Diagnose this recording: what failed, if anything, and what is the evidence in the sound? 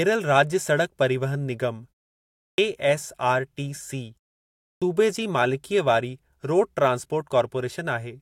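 Speech bursts out of silence with its opening sounds missing: at 2.48 s after a 0.63 s pause, about 0.10 s is swallowed, and at 4.71 s, after a 0.6 s pause, the start of "सूबे जी मालिकीअ वारी" loses about 0.11 s. This is clipped start after a pause, at the playback stage. The output device sleeps through the silence, and it needs roughly a tenth of a second to wake and relock.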